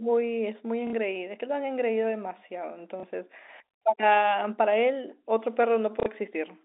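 Speech over a telephone-band line shows packet loss with the last packet repeated at 0.87–0.93 s (60 ms), 3.00–3.03 s (30 ms) and 6.00–6.06 s (60 ms). A held chunk replays as a brief robotic stutter, or as a small blip for the single packet at 3.00 s, which fits 30 ms packets. Unlike a dropout, no silent gap opens.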